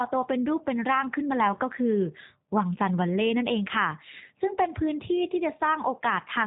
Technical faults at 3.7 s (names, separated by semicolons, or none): G.729 codec